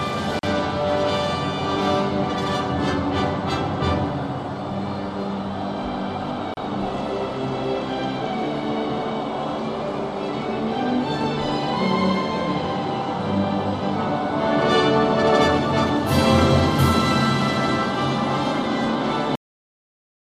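A gap at a join of encoded pieces opens at 0.39 s for about 41 ms, and again at 6.54 s for about 32 ms. Separately encoded segments were joined without trimming the encoder's start delay and end padding, so brief silences with smeared edges interrupt the sound before it resumes.

A cut-off end occurs at 19.35 s. The final buffers were never written, so the audio halts mid-sound and drops straight to digital silence with no natural decay for the remainder of the clip.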